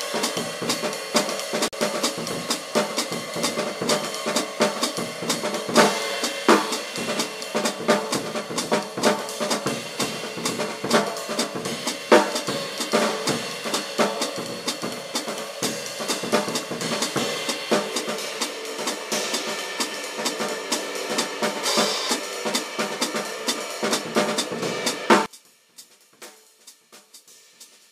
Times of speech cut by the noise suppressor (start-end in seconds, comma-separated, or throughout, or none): none